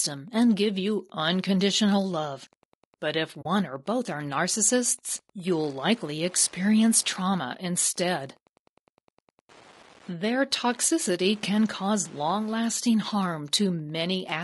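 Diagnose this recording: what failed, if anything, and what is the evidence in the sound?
A steady ticking about ten times a second runs under the whole recording, roughly 30 dB below the speech. This is Wi-Fi interference in the analogue wiring: the circuit rectifies a nearby radio's 102.4 ms beacon.

The speech sounds rough and grainy throughout, with a noisy, synthetic-sounding top band. At the codec stage, the likely cause is low-delay AAC compression (AAC-ELD) at a low bitrate, around 32 kbps.

At 3.41 to 3.46 s, just before "or both are narcissists", the sound fades into a short soft-edged hole. This is AAC frame loss with muting: about 40 ms of lost audio, consistent with two frames, which the decoder zeroed.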